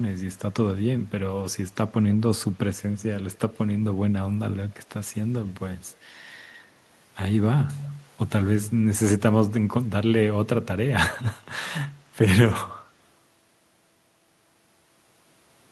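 Faint echo leak appears at 2.76 to 2.98 s, again briefly at 3.33 to 3.39 s, and at 8.64 s: a delayed copy of the speech arriving about 0.28 s behind, roughly 30 to 35 dB below it. Likely cause: a loudspeaker-side echo canceller letting residual pickup through. On a spectrogram, weak delayed copies of the speech harmonics trail the originals.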